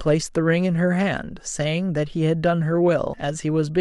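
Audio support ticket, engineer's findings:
Compressed frames skipped at 3.14 s in speech. About two frames, around 200 ms of audio, drop out and playback jumps ahead. The jump fits a frame length of 92.9 ms. Decoder or file integrity: frames missing or rejected as damaged. On the spectrogram, speech contours end abruptly and restart. The waveform shows an envelope discontinuity.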